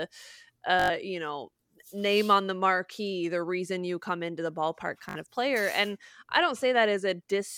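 Packets on the Bluetooth link failed to arrive in time, so the receiver kept replaying its last short buffer until fresh data reached it. This Bluetooth stutter occurs twice in the speech. From 0.80 to 0.90 s, just before "you know name on", about 100 ms of audio is lost, consistent with roughly five dropped packets. From 5.09 to 5.15 s, between "come into the ballpark" and "of player", about 60 ms goes missing. Each gap sounds like a brief buzzing repeat, and the speech then resumes slightly further on.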